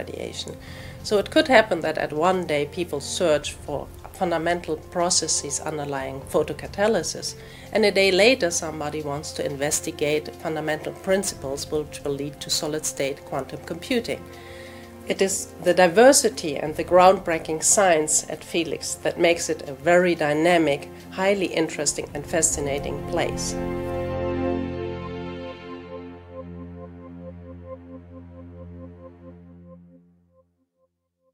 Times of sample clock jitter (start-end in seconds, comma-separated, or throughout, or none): 9.37-15.00